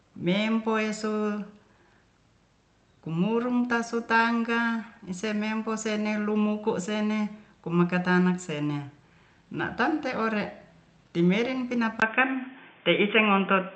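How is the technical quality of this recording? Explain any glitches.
The recording has two audible glitches, one brief and one lasting to the end; the Opus call path carries the speech with content up to about 8 kHz before the second one.

At 4.17 to 4.22 s, a short stall from a late packet: the jitter buffer ran dry, so the last sound was held for 22 ms. Nothing is skipped, unlike a dropout.

From 12.00 s to the end, the input was likely switched to a poorer device. After a 20 ms silence, the speech turns dull, with nothing above 3.6 kHz, about 5 dB level change, and new noise about 35 dB down.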